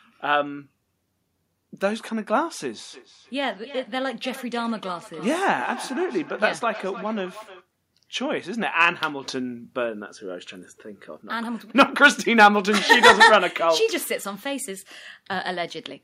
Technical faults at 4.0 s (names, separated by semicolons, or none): feedback echo between two devices